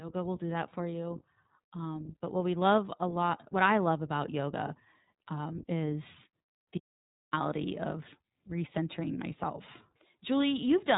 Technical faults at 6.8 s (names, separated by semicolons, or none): iLBC codec; audio dropout to silence